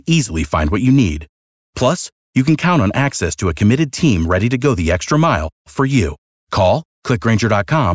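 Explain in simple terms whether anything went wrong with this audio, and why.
Nothing went wrong here: listening through the speech, there's no dropout, distortion, glitch or other fault to point to.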